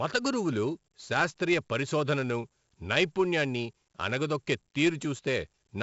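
From start to finish the speech carries 4-bit ADPCM compression, and the damage is heavy. Each sample is coded as a coarse 4-bit step from a predicted value, so a gritty hiss rides on every loud syllable and smears sharp onsets where the step size lags behind. Nothing reaches above about 7.7 kHz, which fits a 16 kHz sample rate at 64 kbps. A spectrogram shows a hard ceiling there and level-tracking noise filling the gaps between harmonics.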